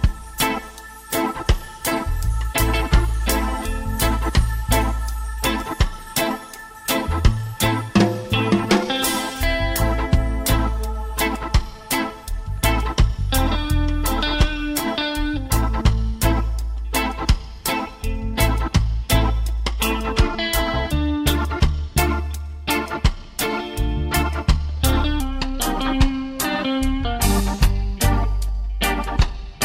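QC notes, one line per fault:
25.2 to 29.65 s, section at the wrong speed: the sound drops about two semitones and drags at 0.893x, likely from playback set to the wrong clock rate.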